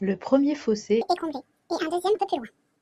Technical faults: section at the wrong speed; damaged data in a compressed stream

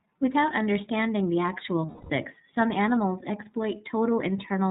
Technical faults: iLBC codec; lost iLBC frames

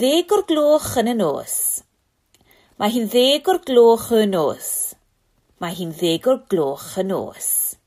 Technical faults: none

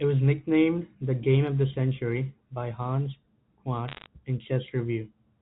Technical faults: bit errors on a digital phone line

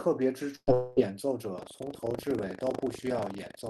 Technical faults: burst of packet loss; long network dropout; buffer tearing

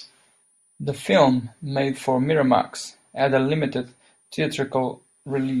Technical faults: switching supply whistle

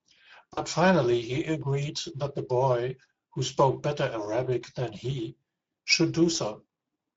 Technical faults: Speex codec; VoIP packet loss concealed by the speech codec

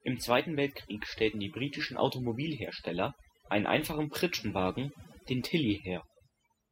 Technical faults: overdone noise removal

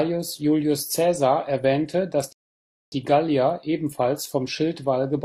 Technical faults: rebuffering stall

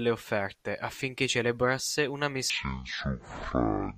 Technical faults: section at the wrong speed

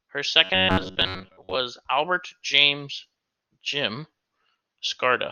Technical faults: robotic sound from repeated short buffers

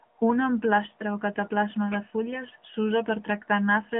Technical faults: AMR narrowband mobile codec

